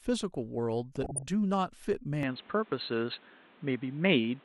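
From 0.96 to 1.28 s the speech is overlaid with bubbling, squelchy chirps, like mud boiling under the programme. This is DAB burbling: bit errors slipped past error correction into the MP2 data, so corrupted samples put blips of noise in individual sub-bands and corrupted scale factors made sub-bands jump in level frame by frame.

At 2.23 s the sound turns dull and boxy with no gap, stays that way to the end, and nothing remains above 4.2 kHz. A new background hiss sits about 30 dB below the speech, while loudness stays roughly unchanged. The likely cause is the input switched to a poorer device mid-recording.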